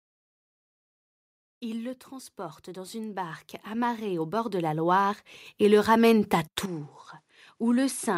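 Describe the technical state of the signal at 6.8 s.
At 6.8 s the input has likely switched to a poorer device, from 6.66 s to the end: duller sound, nothing above 11.5 kHz on the spectrogram, a new faint noise floor, and a smaller waveform, roughly 10 dB lower.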